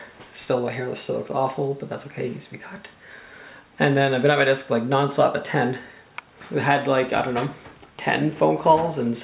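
Nothing stood out as a technical problem on listening to this audio.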